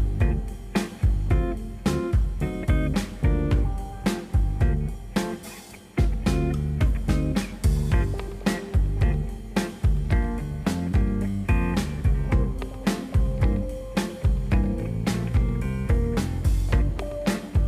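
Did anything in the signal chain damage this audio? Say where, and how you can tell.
No, nothing along the chain has left an audible mark on this audio, so there is no damaged stage to point to.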